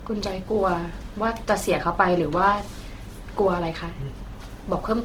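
Throughout the speech, the audio was likely squeezed first through a very low-bitrate codec, which fits Opus at around 16 kbit/s, then re-saved as MP3 at about 192 kbit/s: low-bitrate audio saved at a high bitrate. The first pass's artefacts remain, and nothing sounds above 20.1 kHz.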